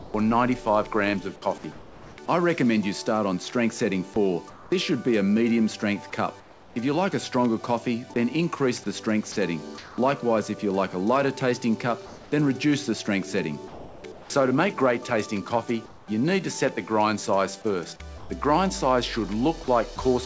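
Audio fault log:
0.00–2.18 s and 18.18–19.98 s, sound chopped by the voice detector: The sound turns choppy, with its quieter edges cut away and filled with synthetic noise. About 0.66 s is replaced in the first stretch and about 0.18 s in the second. The likely cause is a sender-side voice detector toggling on and off repeatedly, so each brief gap is filled with generated comfort noise rather than the real audio.
4.50–6.76 s, 9.32–9.98 s and 12.06–16.08 s, comfort noise in place of the background: In these pauses the natural background loses its texture and becomes a flat, featureless hiss. That hiss covers about 0.58 s, 0.24 s and 1.02 s respectively. It likely comes from discontinuous transmission. The sender stops sending once it judges there is nothing but background, and the receiver synthesises noise with a roughly matching spectrum until the sound resumes. Like the rest of the clip, this noise carries nothing above 8 kHz, which fits a 64 kbps wideband call codec.
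9.32–9.36 s and 13.68–14.04 s, sound dropped by the voice detector: A bit of genuine sound vanishes into steady noise and then snaps back. About 40 ms is lost at the first point. At the second, about 0.17 s of sound is lost inside a 0.36 s patch of fill. Likely the detector mistook quiet material for background and stopped transmitting, so the receiver played comfort noise until the detector triggered again.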